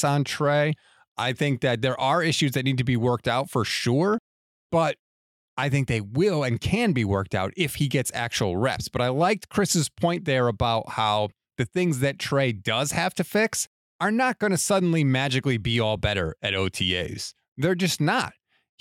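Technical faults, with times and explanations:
No technical faults can be heard anywhere in the speech recording.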